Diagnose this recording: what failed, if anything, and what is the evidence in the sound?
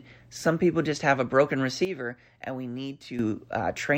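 A sudden gain jump at 1.85 s, right after "just have a broken", drops everything about 10 dB until 3.19 s; background noise falls too, unlike compression, likely an unramped digital gain change.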